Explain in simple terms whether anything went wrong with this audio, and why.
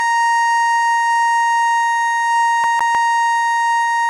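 Two problems can be heard in this music. Throughout the clip, the sound is dull and grainy, with nothing above about 11.5 kHz. Different kinds of distortion sit on top of each other. The likely cause is transcoding between lossy codecs. The music was compressed once, then compressed again in a different format. The second pass wasted effort reproducing the first pass's damage and added its own, and the missing top end could not come back.

From 2.64 to 2.95 s, a short piece of music about 155 ms long plays twice in a row. There is a brief gap at each jump, giving a quick, even stutter. This is a CD stuck on one turn. A scratch knocks the laser back to the same spot on each rotation, so that fragment repeats before playback moves on.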